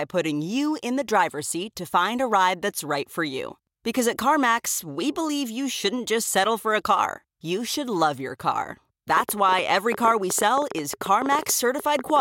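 Something, likely interference from nearby equipment or a faulty connection or power supply, starts injecting short pulses into the signal from 9.17 s, just after "should love your car", and keeps doing so until 12.20 s. The result is a train of clicks: around thirty similar-shaped pops at about 10.6 per second, spaced irregularly rather than evenly. They peak roughly 10 dB above the speech, so the ticking sits clearly on top of the voice and carries through the pauses.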